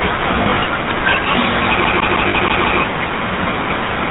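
A buzzy, gravelly roughness runs through the whole speech clip, with nothing heard above 4 kHz. This is the GSM full-rate codec, which rebuilds the voice from a vocal-tract model driven by regular pulses, and the damage fits the 13 kbps full-rate coder.

From 0.42 to 0.63 s the speech turns briefly into a rough, metallic ring. These are lost GSM frames: about 100 ms of audio went missing in short gaps spread over 200 ms, the longest a few tens of milliseconds. Each gap was filled by repeating the last good frame.

From 1.85 to 2.80 s the audio stutters quickly and evenly, like a skipping CD. The same 0.16 s snippet repeats six times, with a short mute at each jump, because the CD is stuck on one turn and the laser falls back to the same spot every revolution.

Within that stutter, from 2.28 to 2.35 s, more lost GSM frames add a brief metallic, held ring, as about 60 ms of missing audio is covered by a repeat of the previous frame.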